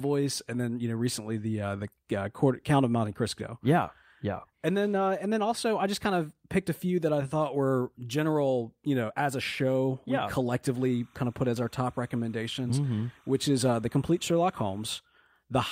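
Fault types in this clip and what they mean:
Timecode bleed: Linear timecode from a nearby track or cable has leaked into the speech. The code is a square wave that flips between two pitches, near 1 and 2 kHz. Its frames run at 30 per second, so the pattern repeats quickly. It is heard as a steady chirping warble behind the speech from 10.74 to 15.00 s. It sits low, roughly 35 dB below the speech.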